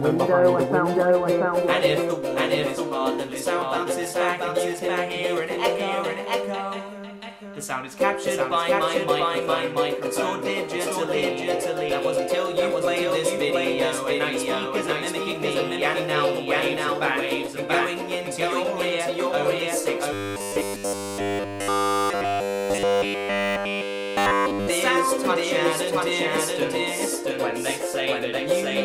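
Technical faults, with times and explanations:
Throughout, doubled audio track: a second full-band copy at about the same level trails the original by roughly 0.7 s, likely from a duplicate capture path.
20.13–24.69 s, robotic sound from repeated short buffers: the sound becomes a rigid 100 Hz buzz, likely because nearly all incoming audio was replaced by repeats of one 10 ms buffer.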